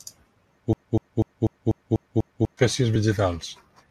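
From 0.73 s to 2.57 s the speech falls into a broken-record loop. A 246 ms fragment repeats exactly, back to back, seven times. The player or stream likely stalled and kept resending its last fragment. The speech meant for that span is lost.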